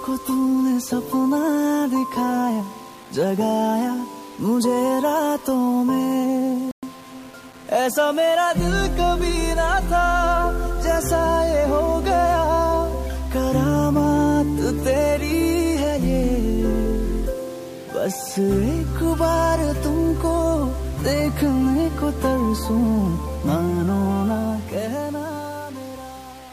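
The audio was most likely reduced to about 6 bits and rounded without dither, a case of low bit depth without dither that lasts the whole clip. With so few steps available, the rounding error tracks the waveform instead of spreading as a steady hiss, so every quiet passage turns gritty and grainy, and the faintest parts either vanish or sputter between two levels. The resulting distortion sits roughly 25 dB below the signal.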